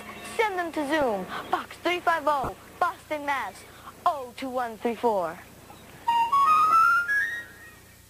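At 1.02 s and again from 2.44 to 2.49 s, a corrupt frame decoded: damaged bits reached the decoder, which played the frames anyway, scattering energy to wrong frequencies. Each is a brief error peaking near -20 dBFS, a spectrogram smear and a waveform blip.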